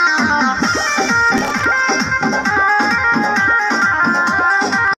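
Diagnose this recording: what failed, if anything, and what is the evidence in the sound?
The driver/buffer stage fell behind here: there's a burst of processor overload crackle from about 1.29 s to 1.64 s, a gritty tearing laid over the sound that clears as soon as the load drops. Buffers that couldn't be filled in time, probably around twenty of them, each well under a millisecond, got replaced with stale audio. Every one of those repeats has hard edges, and strung together that fast they turn into crackle.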